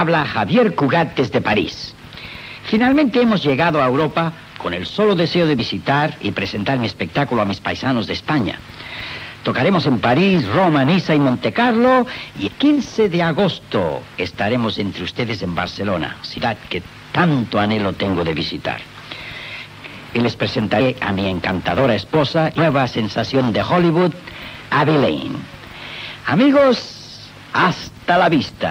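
Compressed frames skipped at 5.59 s, 12.46–12.48 s, 16.37 s and 22.57 s: the sound jumps ahead by missing frames, roughly 15, 200, 150 and 150 ms.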